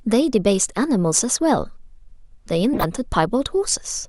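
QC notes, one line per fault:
2.73 to 2.86 s, corrupt frame decoded. A burst of harsh, chirpy noise cuts across the speech for about 0.12 s. It is loud, peaking not far below full scale. Bits inside a run of about five compressed frames were flipped, and the decoder played them anyway. Misread gains and codes put energy at the wrong frequencies. The damage lasts only as long as those frames, so the sound is a short, sharp blip.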